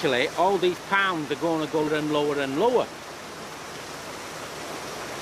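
At 1.88 s and again at 4.13 s the sound jumps forward abruptly, with roughly a third of a second missing each time and the two sides butted together without any gap of silence. This is audio missing between chunks: the regular spacing likely comes from a process handling the signal in 2.5-second blocks and dropping a short stretch at each handover between one block and the next.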